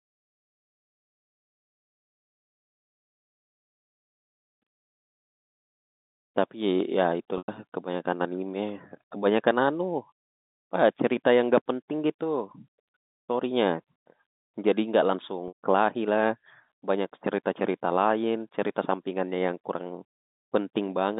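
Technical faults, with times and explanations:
7.38–7.48 s and 15.48–15.55 s, packet loss with pitch repetition: a brief held, buzzy tone fades to a short silence, then the sound resumes through a quick cross-fade. About 100 ms and 120 ms were lost, and the receiver filled each gap by repeating the last pitch period.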